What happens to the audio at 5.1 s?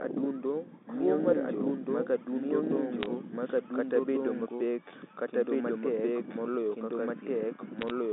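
At 5.1 s the doubled audio track is present, as it is throughout: a full-band copy runs about one and a half seconds behind at roughly equal loudness, likely from a second, slower capture path. It sounds like overlapping speech with no echo decay. On a spectrogram every pattern reappears about 1.5 s later, equally bright and confined to the 200 Hz to 3.6 kHz telephone band.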